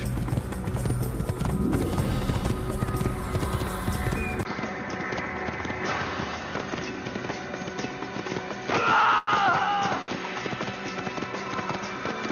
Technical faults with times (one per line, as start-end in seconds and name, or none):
4.43-12.31 input switched to a poorer device
9.18-9.29 short stall from a late packet
10.01-10.10 short stall from a late packet